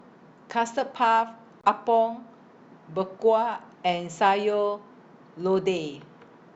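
At 1.61 s the speech drops out cleanly for about 24 ms, back by 1.64 s. That short gap of dead silence is the signature of a Bluetooth stall. The likely cause is radio interference holding up packets long enough that the receiver's buffer emptied, so playback simply paused until the retransmitted audio arrived and filled it again.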